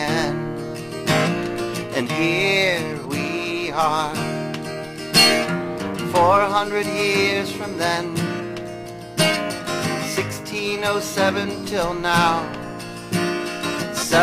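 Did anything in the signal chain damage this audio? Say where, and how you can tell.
Yes: sharp clicks at 4.11 s and 10.21 s, likely dropped samples in the driver or buffer, where a fraction of a millisecond is skipped and the waveform jumps.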